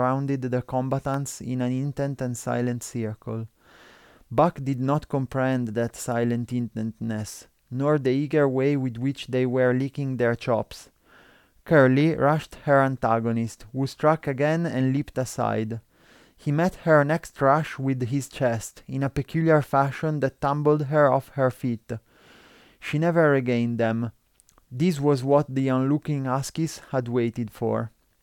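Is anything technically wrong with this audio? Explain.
Yes. At 1.14 s a single sharp snap lasting only a couple of milliseconds lands on top of the speech, an electrical switching spike, peaking around -25 dBFS. It is most likely a brief arc from a nearby switch, motor or static discharge coupling into the audio line and adding itself on top of the recording. On a waveform it shows as one narrow needle, and on a spectrogram as a thin vertical stripe spanning the full frequency range.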